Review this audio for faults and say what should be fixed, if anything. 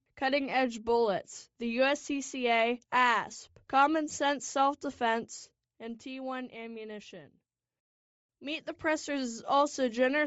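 Throughout the speech there is plainly audible codec damage: the upper spectrum sounds thinned and replaced by a grainy, breathy noise fill, giving consonants and vowels a rough, hashy edge. This is likely Bluetooth LC3 compression, the LE Audio transform codec, running at a low rate; the texture fits short 7.5 ms frames at about 32 kbps, where too few bits remain to code the high bands directly. The smooth level changes are heard as intended fades. To prevent it, record from a wired or local source, or set the LE Audio link to a higher LC3 bitrate.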